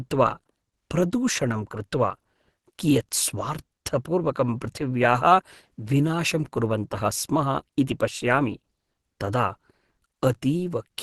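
Speech coded throughout its length with likely Opus compression at a low bitrate, around 16 kbps, in the hybrid speech mode, produces plainly audible damage: nothing survives above 12.1 kHz, and the voice sounds muffled and hoarse.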